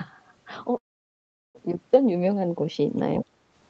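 A speech recording with a call audio freeze from 0.77 s to 1.57 s: the sound briefly trails on, then drops to near silence for about 0.75 s before resuming where it stopped. The likely cause is delayed packets draining the jitter buffer, inserting about 0.77 s of delay while losing nothing. The audio is band-limited to 8 kHz, as expected from a call codec.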